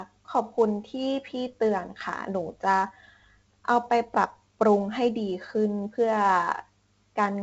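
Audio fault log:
Throughout, 4-bit ADPCM compression: a gritty hiss rides on the speech and swells and fades with its loudness, and the top end is dull, with nothing above 7.8 kHz. Each sample is coded as a coarse 4-bit step from a predicted value, so the rounding error becomes broadband noise tied to the signal level. The damage here is heavy. The missing highs point to a low sample rate of around 16 kHz, which fits a 64 kbps stream.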